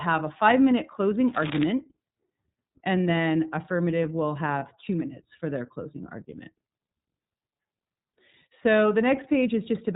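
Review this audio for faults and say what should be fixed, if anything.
The whole clip has a muffled, slightly rough and synthetic quality, with no brightness above 4 kHz and consonants sounding dull. This is the iLBC codec at work. It is a narrowband VoIP coder that encodes each frame's excitation independently, and the 30 ms framing heard here points to its 13.33 kbps mode. The coding damage is plainly audible rather than subtle. To prevent it, record or transmit with a wideband codec such as Opus when quality matters.

From 1.28 to 1.64 s, a dense, uneven scratching rustle sits over the speech, roughly 10 dB below it. This is cable scratch noise, likely from a worn cable, connector or control being moved. The contact resistance changes rapidly as it shifts, and the resulting noise bursts ride on the signal for about a third of a second. To prevent it, replace or secure the faulty cable and connectors and avoid handling them while recording.

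At 4.58 to 4.63 s, the speech briefly turns into a held, faintly buzzy tone before snapping back to normal. These are lost iLBC frames. Packets went missing, and the decoder filled the gap by repeating the last pitch cycle blended with noise. The roughly 30 ms gap fits a single lost frame. Because iLBC frames stand alone, recovery is almost immediate. To prevent it, improve network reliability or add jitter buffering and forward error correction.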